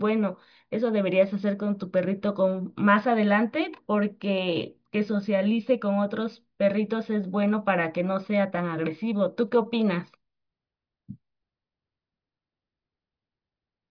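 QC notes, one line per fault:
No faults found in this recording.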